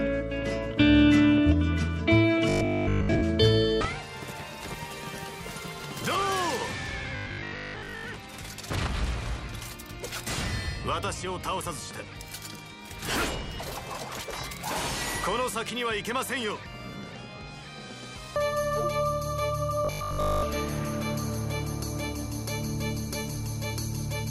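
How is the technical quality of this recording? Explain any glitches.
Three brief glitches mar the recording, all robotic sound from repeated short buffers: 2.49–3.23 s, 7.16–8.04 s and 19.85–20.43 s. Audio likely arrived too seldom, so roughly 20 ms slices were looped in place of missing material, imposing a rigid 50 Hz metallic buzz. Most of the sound is replaced in the first two, all of it in the last.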